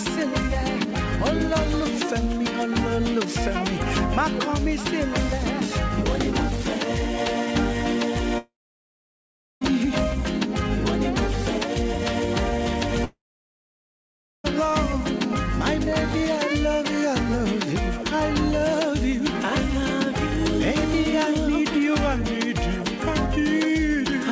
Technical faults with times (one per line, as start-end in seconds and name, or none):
8.38-9.73 long network dropout
13.04-14.46 long network dropout